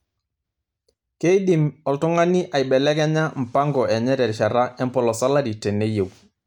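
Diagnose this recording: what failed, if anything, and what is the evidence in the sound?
No fault is audible.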